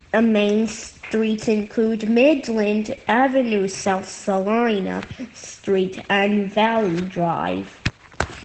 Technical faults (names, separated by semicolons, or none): Opus voice compression